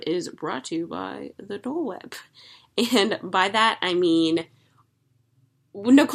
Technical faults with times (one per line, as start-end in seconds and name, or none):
none